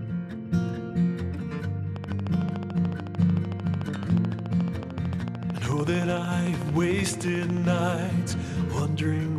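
A train of clicks runs from 1.96 s to 7.80 s, about seventy near-identical pulses arriving at a steady 13.6 per second. Something outside the program material is injecting sharp transients at a fixed rate, most likely interference from nearby equipment or a faulty connection or power supply. The clicks peak about 5 dB above the sound itself, so they come across as an even, insistent ticking that carries straight through the quieter gaps.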